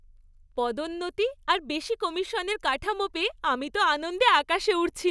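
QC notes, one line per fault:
No faults found in this speech clip. Nothing here calls for a QC entry.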